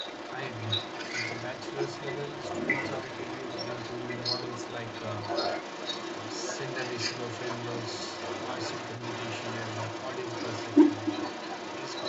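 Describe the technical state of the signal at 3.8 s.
At 3.8 s an echo leak is present, as it is for the whole clip: a distinct copy of the speech returns about 0.36 s late, roughly 5 dB louder than the original, likely from a loudspeaker whose echo canceller let it through. Unlike room reverberation, it is a separate repeat, not a smooth decay.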